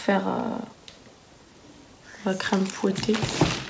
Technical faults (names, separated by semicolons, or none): none